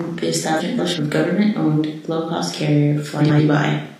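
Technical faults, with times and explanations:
0.59 to 0.99 s and 3.19 to 3.40 s, frames out of order: in each stretch two adjacent blocks of the speech play swapped, about 186 ms each in the first and about 93 ms in the second, which fits runs of four and two frames of roughly 46 ms. The result is a brief garbled flutter. Unlike a dropout or skip, nothing is missing and the timing stays intact.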